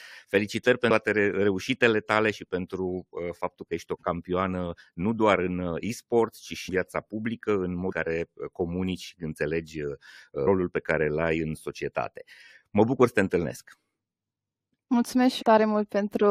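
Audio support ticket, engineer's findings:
Compressed frames skipped at 0.89 s (before "reușitele tale și pentru"), 6.68–6.70 s, 7.91–7.93 s (after "viața publică în"), 10.46 s and 15.41–15.43 s. Each jump drops about 150–300 ms of audio in roughly 23 ms frame steps, which fits a decoder dropping missing or damaged frames.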